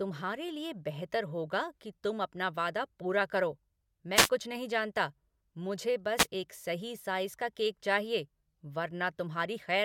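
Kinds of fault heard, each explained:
Wireless microphone noise hit: the FM radio link fades briefly as reflections cancel, so receiver noise pushes up through the speech. You hear a short static swish at 4.15 to 4.29 s, right after "अपना वादा पूरा करो", and again at 6.17 to 6.27 s, after "कुछ नहीं जानता मुझे".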